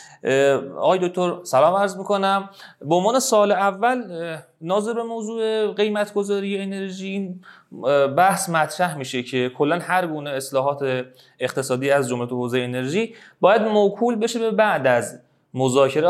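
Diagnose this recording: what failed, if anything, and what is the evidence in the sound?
No fault detected anywhere.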